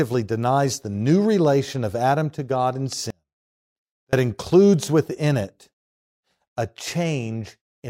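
The signal feed was likely interrupted for about a second while the downstream path stayed live, producing an audio dropout to a faint residue from 3.10 s to 4.13 s. The speech cuts off abruptly mid-flow rather than pausing or fading, and for that second the gap is not silent but holds a faint leak of the sound, roughly 35 dB below its normal level, before full level snaps back just as suddenly.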